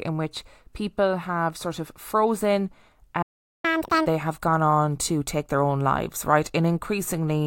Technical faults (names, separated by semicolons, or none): playback stall; catch-up at higher speed